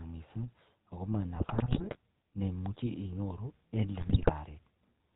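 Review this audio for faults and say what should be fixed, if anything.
The GSM full-rate codec runs through the whole clip. It models the vocal tract and drives it with regularly spaced pulses that keep only every third excitation sample, which fits the 13 kbps full-rate mode. The result is a plainly audible buzzy, gravelly roughness. A spectrogram shows a hard ceiling at 4 kHz. Record or transmit with a wideband codec instead of GSM full rate.

GSM bit errors break up the speech from 1.36 to 1.97 s, just before "chemache inyoru en", and again from 4.0 to 4.3 s, just after it. Corrupted filter, pitch and gain values distort individual frames, producing squawks, pops and gargling. The sound points to an error rate of a few percent, heavier in the second burst. On a waveform these show as sudden level spikes, and a spectrogram shows blotchy, misshapen frames. Use a stronger radio link or better error protection so that flipped bits never reach the decoder.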